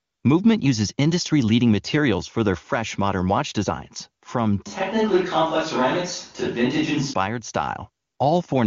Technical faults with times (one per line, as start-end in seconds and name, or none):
0.00-0.23 AMR comfort noise
4.67-7.13 switch to a distant microphone
8.05-8.19 AMR comfort noise